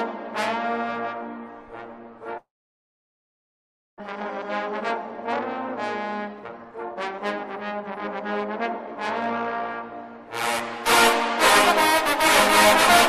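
From 2.37 to 4.02 s the sound breaks into a buzzing continuation of the last moment that fades within about a tenth of a second, leaving near-silence for about 1.5 s before audio resumes with a piece missing. This is likely a long network dropout: nothing arrived, the receiver stretched out the final sound, and about 1 s of audio was never played, with the playback delay shifting by roughly 0.7 s.

From 5.69 to 7.97 s the audio runs noticeably hurried, about 23 percent faster, yet its pitch stays put. Between 8.37 and 9.37 s a milder rush follows, around 5 percent fast. Both are jitter buffer speed-up: with more audio queued than the target, the receiver trimmed many tiny pitch-period slices to shrink the backlog, cutting roughly half a second in the first stretch and only a few hundredths in the second.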